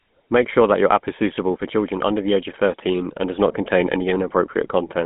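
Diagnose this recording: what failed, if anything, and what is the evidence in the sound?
The failure is at the codec stage: the whole clip has passed through the GSM full-rate codec. The damage is plainly audible from start to finish. The speech has a buzzy, gravelly grain. That roughness comes from the coder rebuilding the excitation from sparse, regularly spaced pulses fed through a vocal-tract model. The band runs from about 150 Hz to 3.5 kHz, with nothing above 3.8 kHz. That fits a 13 kbps full-rate phone coder.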